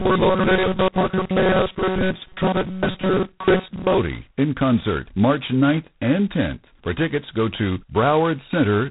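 From start to end the speech carries G.726 ADPCM coding damage. Only about two bits per sample encode the difference from an adaptive prediction, which fits the 16 kbit/s mode. The result is a heavy, rasping hiss that rises and falls with the speech level. Nothing above 3.9 kHz remains.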